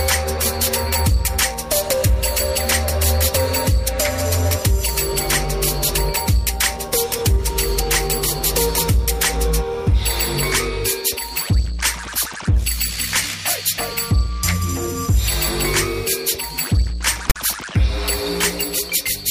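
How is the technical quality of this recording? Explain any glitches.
One glitch stands out near the end. At 17.30 to 17.36 s, file tags are played as audio. Text tags were read as samples, giving a harsh, lopsided rasp, then the zero padding drops to silence.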